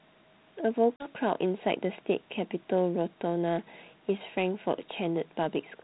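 Packet loss on an ADPCM call hits at 0.96 s and runs to 1.11 s: a hard-edged silent hole about 40 ms long, likely two lost packets. When the speech resumes, the decoder's adaptive predictor and step size no longer match the sender's, so the speech returns slightly distorted before settling.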